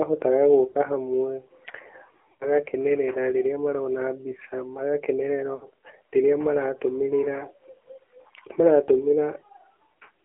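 Thin, boxy speech with a buzzy, synthetic edge runs through the whole recording. The band is held between roughly 300 Hz and 3.4 kHz, so the low body and all the upper sibilance are missing. That is the AMR narrowband mobile codec. The voice is rebuilt from a vocal-tract model driven by sparse pulses, and the plainly audible coarseness fits one of its lower modes, around 7.4 kbps. Three short breaks interrupt it. At 0.72 to 0.77 s there is a brief dip and warble lasting about 20 ms of audio. At 2.32 to 2.57 s the sound smears out, fades toward silence over about 80 ms, and returns rough. At 5.56 to 5.66 s a similar drawn-out fade lasts about 60 ms. These are lost AMR speech frames. When frames fail to arrive intact, the decoder repeats the last good pitch and filter settings with shrinking gain, so the longer gaps stretch and die away before clean frames resume.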